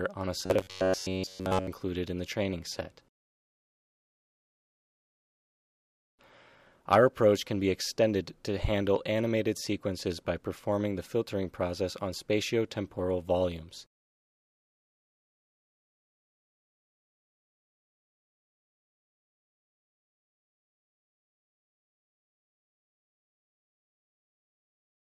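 From 0.38 to 1.68 s, fresh audio was likely arriving too seldom, so the playback path filled the gaps by looping its last short buffer while the real signal went missing. This produces robotic sound from repeated short buffers: about 70 percent of the stretch is repetition, and the loop imposes a rigid 93.8 Hz buzz, a period near 10.7 ms. The sound turns metallic, loosely tracking its original contour.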